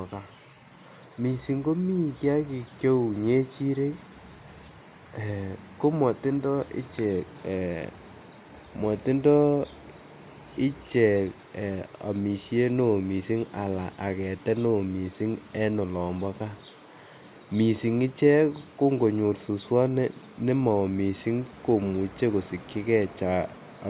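No faults can be heard anywhere in this speech.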